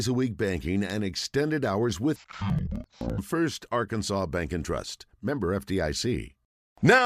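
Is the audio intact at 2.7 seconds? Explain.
No. At 2.7 seconds the speech sits inside a stretch of interleaved audio read as planar, running from 2.16 to 3.24 s, just after "banking and extended hours". Each block of alternating left and right samples is split down the middle, with the first half taken as left and the second as right. The halves play simultaneously at half rate, so the voice drops an octave, sounds doubled, and chops at about 11.7 Hz. That corresponds to 85 ms blocks, which fits a 4096-sample block size.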